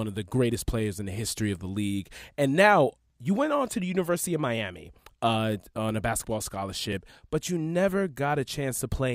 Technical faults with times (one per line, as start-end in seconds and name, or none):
3.10 dropped buffer (overrun)
6.92 dropped buffer (overrun)